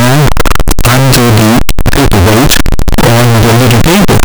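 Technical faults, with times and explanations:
Throughout, signed and unsigned mixed up: the speech turns into loud, harsh distortion, and soft sounds are as loud as strong ones. Likely the 8-bit samples are read with the wrong sign convention, flipping the top bit so each zero crossing jumps across the full range.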